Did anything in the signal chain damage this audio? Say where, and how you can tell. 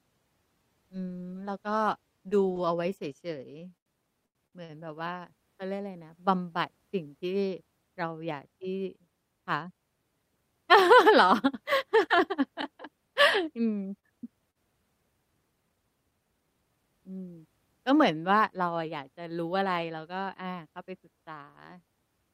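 Yes. Between 3.59 and 4.72 s the network jitter buffer ran dry five times, producing repeated stalls (stutter). The receiver stretched the last sound to fill about 0.29 s in all, the longest gap 90 ms. Nothing is lost, which separates this from packet loss; the speech drags instead.

Short concealed packet loss occurs at 13.99 s and again at 14.51 s, each time about 40 ms of speech never arriving. The decoder patched each hole by continuing the preceding sound, giving a brief smear. Unlike the stalls, timing stays put and content is truly gone.

From 15.55 to 16.84 s a jitter buffer speed-up runs the speech at 110% of normal rate, trimming roughly 0.15 s by cutting out pitch-period slices. Pitch stays unchanged, which distinguishes it from a resampling or clock-rate error that would shift pitch too.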